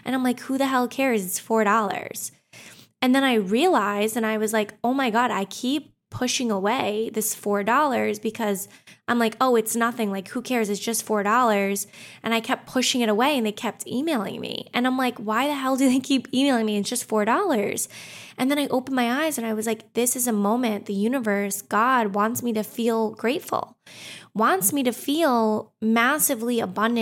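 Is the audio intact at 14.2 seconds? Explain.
Yes, the speech at 14.2 seconds plays through intact, with no dropout, click or other fault at that moment.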